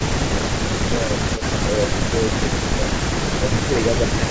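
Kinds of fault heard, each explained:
Speech suppressed in double talk: The speech sinks by up to about 10 dB in short dips at 0.09–0.18 s and 0.35–0.42 s, through a patchy stretch from 0.88 to 2.91 s totalling roughly a second and a half, then again at 3.35–3.76 s and from 4.09 s to the end. This is likely an echo canceller turning down the near talker while the far side spoke at the same moment, unable to separate the two.
Echo leak: A faint, brief copy of the speech, about 20 dB below it, surfaces at 1.37–1.42 s, trailing the original by 233 ms. That scrap is likely loudspeaker sound that the far end's echo canceller failed to strip from its microphone, so a delayed fragment of this side's own audio was sent back into the call.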